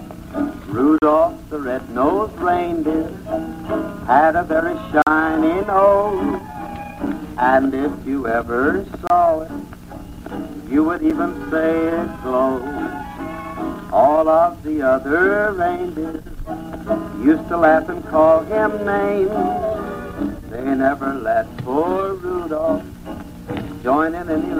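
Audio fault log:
0.98–1.02 s, 5.02–5.07 s, 7.07 s, 9.07–9.10 s, 11.10 s: gap between stream segments. Hard-edged silences of 6 to 46 ms fall on a 2 s segment grid. Unlike a dropout, nothing is lost. The sound resumes exactly where it stopped, just delayed.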